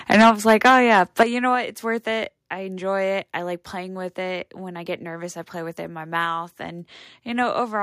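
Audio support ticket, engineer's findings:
Microphone overload, 0.11 to 1.23 s: harsh, crackling edge on the loudest syllables, peaks flattened, roughly one sample in twenty clipped. Likely mic input gain set too high, driving peaks about 8 dB past the converter's ceiling, so waveform tops are sheared off.

Microphone volume stepped down, at 0.22 s, 1.23 s and 2.25 s: abrupt level drops of about 4 dB, 9 dB and 2 dB, voice and background falling together. Likely call software's automatic gain control cutting device input volume in single steps.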